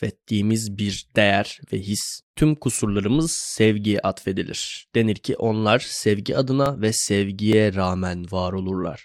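At 6.66 s the speech gives a slight jump in the sound. The same thing happens again at 7.53 s. There is no gap or silence either time. Each is most likely a dropped buffer (overrun). The recording software did not collect a block of samples before the hardware overwrote it. That piece was lost, roughly a couple of milliseconds. The audio on either side was joined directly.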